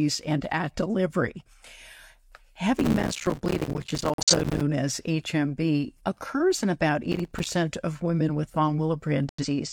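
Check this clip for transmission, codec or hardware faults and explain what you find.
Two kinds of fault are present: processor overload crackle in two bursts, and corrupt frames muted in two places.

Processor overload crackle runs from 2.79 to 4.61 s, and again from 7.12 to 7.47 s, between "occurs in about" and "of women with". The processor repeatedly failed to fill its short audio buffers on time, and each miss left a tiny silent hole. The gaps are very short and packed closely, which fits buffers of roughly 5 ms. Strung together they make a gritty, tearing crackle over the speech, most of it in the longer first burst. On a waveform the speech is chopped by many hairline gaps with hard edges. On a spectrogram each edge appears as a thin vertical broadband streak.

Corrupt frames muted appear from 4.13 to 4.34 s, inside the first crackle burst, and from 9.29 to 9.45 s. Damaged compressed frames were rejected by the decoder, and the player substituted silence while keeping timing intact. 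The sound cuts out abruptly, and the hole lengths fit four lost frames and then two. On a waveform the signal drops to a flat line. On a spectrogram the same spans show as blank columns with sharp vertical borders.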